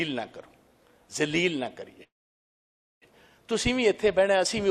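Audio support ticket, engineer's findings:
Call audio freeze, 2.03–3.04 s: last sound briefly stretched, then 0.92 s of silence. Audio resumes where it stopped, nothing skipped, but now runs 0.98 s later. Likely delayed packets emptied the jitter buffer, and receiver concealment filled the gap.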